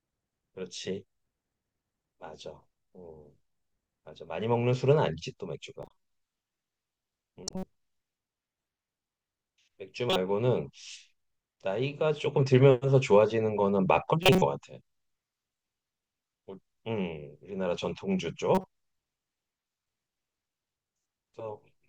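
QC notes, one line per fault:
5.82–5.91 s, 7.44–7.64 s, 10.08–10.16 s, 14.23–14.42 s and 18.55–18.64 s, corrupt frame decoded: short chirpy bursts where damaged compressed frames got played anyway, so misread gains and codes dump energy at the wrong frequencies. Faint at 5.8 s, loudest at 14.2 s.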